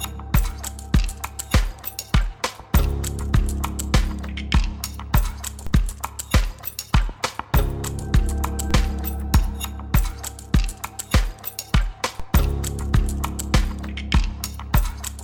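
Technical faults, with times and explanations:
5.67 s, 8.71 s and 12.20 s, DC step: Three times the waveform's zero line jumps suddenly by about -19 dBFS. Each jump is heard as a short, low thump or click. The sound itself carries on unchanged underneath. After each jump the offset does not hold. It drains away as a decay, which fits a high-pass of around 5 Hz pulling the baseline back to zero. That suggests an offset being switched in or a converter recalibrating.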